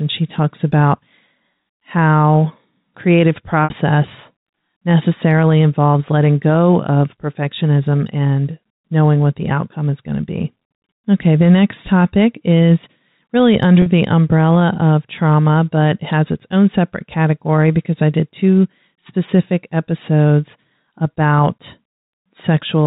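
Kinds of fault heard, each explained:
Packet loss with pitch repetition: lost packets leave gaps of 60 ms at 3.64 s and 40 ms at 13.82 s, bridged by a repeated pitch period, heard as a brief buzzy hold rather than a silent dropout.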